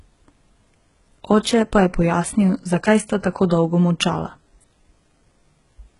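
From start to finish the speech carries heavy damage that is likely HE-AAC compression at a very low bitrate, something around 12 kbps. Nothing sounds above 11 kHz, yet the top of the spectrum still seems bright, because band replication copies lower content upward instead of coding the real treble. Those rebuilt highs lack harmonics aligned with the lower band, so sibilants come out gritty and metallic. A plain low-pass filter would leave the top dull, not bright and grainy.

At 1.43 to 1.45 s, just before "pa je pojasnil zakaj", there is pre-echo. It is a short hiss lasting about 23 ms that arrives ahead of the attack. The codec spread quantisation noise across a block in which the sharp onset fell late, so noise sized for the loud part leaked into the quiet gap before it, and the attack sounds smeared. Unlike a click or dropout, this noise builds up before the onset rather than breaking the sound itself.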